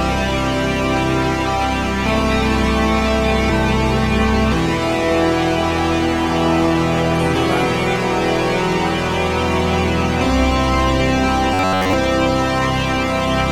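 From 11.54 to 11.93 s there's robotic sound from repeated short buffers: a rigid 94 Hz buzz, likely from one roughly 10.7 ms chunk looping throughout.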